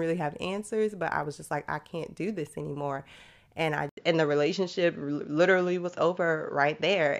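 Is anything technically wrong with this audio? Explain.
Yes. An input switched to a poorer device at about 3.89 s, and it lasts to the end of the speech. After a gap of about 80 ms, the band stops at 7.2 kHz, so the sound turns duller and more boxed-in. The level shifts by around 5 dB, and a new noise floor appears well below the signal. The likely cause is the system changing to a different, narrower-band microphone or a headset call profile partway through.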